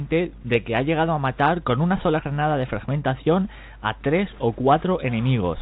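No technical faults turn up anywhere in the recording. It comes through a call path whose codec leaves nothing above 4 kHz, which fits G.711 mu-law.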